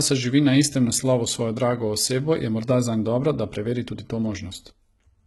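A speech recording, likely squeezed through heavy HE-AAC compression at a very low bitrate, perhaps around 16 kbps, throughout; the replicated treble stops near 11.8 kHz and sounds gritty, metallic and lispy on s sounds.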